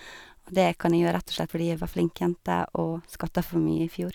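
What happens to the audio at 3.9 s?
Nothing goes wrong at 3.9 s; the audio runs through that moment intact, with no fault to be heard.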